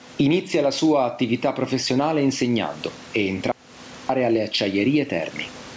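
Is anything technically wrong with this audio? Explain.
Yes, two faults can be heard in this speech.

Gain pumping runs through the whole clip. The input gain is likely set far too high, with a fast limiter or compressor clamping it on every loud syllable and releasing in between. The level swings by something like 15 dB. Loud and quiet passages sit unnaturally close together, and the speech sounds squashed and breathing.

Audio dropout to a faint residue occurs from 3.52 to 4.09 s, right after "attività professionale insegnando e". For about 0.58 s the speech signal is likely lost while the path downstream stays live. The gap is not silent; it holds only a low mains hum about 50 dB below the speech. The cut and the return are abrupt, unlike a natural pause or fade. The audio tops out at 8 kHz, as expected for a G.722 call path at 64 kbps.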